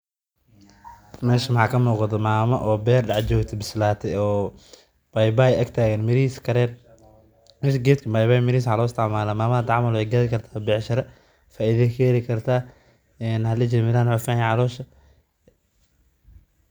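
No technical faults can be heard anywhere in this speech recording. Nothing in the signal chain draws attention to itself at any point.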